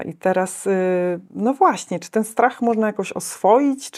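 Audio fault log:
Nothing to log here, since there's no fault to be heard anywhere in this bit of speech.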